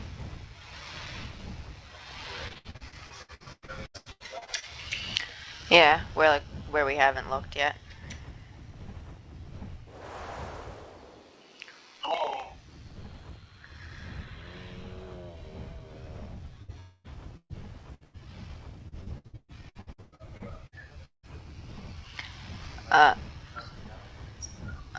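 Repeated packet loss (robotic sound) runs from 2.48 to 4.65 s. Eighteen separate holes, the longest 99 ms, were each papered over by stretching the preceding sound, so about 39% of the stretch is concealment. The result is choppy, with roughly 0.87 s of real audio missing.

A burst of packet loss hits at 16.62 s. About 60 ms never arrived, and the receiver extended the last sound and faded it, leaving a brief held buzz or hiss before the audio skips ahead.

From 16.80 to 17.07 s comes what is likely a long network dropout. For 240 ms the sound is an extrapolated tail that decays rather than going silent, and the audio then resumes with that quarter-second gone.

Three more bursts of packet loss follow. From 17.37 to 17.53 s, 120 ms is lost, and the concealment fades to silence for its last 60 ms. At 17.95 s a 60 ms gap is followed directly by a 90 ms one ending at 18.16 s.

Repeated packet loss (robotic sound) returns from 18.88 to 21.26 s. 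Thirteen gaps, one as long as 179 ms, are filled by continuing the previous sound, covering about 37% of the span. It sounds robotic and broken, with roughly 0.9 s dropped. The call path itself stops at 8 kHz, which fits G.722 at 64 kbps.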